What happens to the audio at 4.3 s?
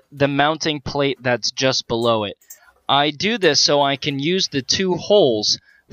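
Nothing goes wrong at 4.3 s; the audio plays through that moment intact, with no dropout, click or other fault.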